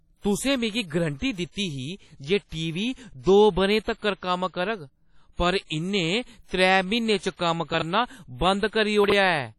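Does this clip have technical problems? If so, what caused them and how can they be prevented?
Yes. Throughout the speech there is heavy codec damage: a ringing, washy quality with hiss that swells and fades with the signal, and nothing above 13.3 kHz. The likely cause is WMA compression at a low bitrate, around 32 kbps, which zeroes weak spectral lines. Unlike plain band-limiting, it adds this moving noise. Encoding at a higher bitrate or with a better codec prevents it.

Pre-echo appears from 3.98 to 4.02 s. A short hiss spreads about 40 ms ahead of a sharp attack, because the transform block's quantisation noise fills the quiet moment before it. Unlike a click, it leads into the onset. Encoders that switch to short blocks at transients prevent it.

Chunks out of order occur at 7.74 to 7.82 s and 9.04 to 9.12 s. A 20 ms chunk plays three chunks late, making a brief jumbled moment with hard joins. 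Unlike a dropout, nothing is missing. Reordering packets by sequence number before playback or writing prevents it.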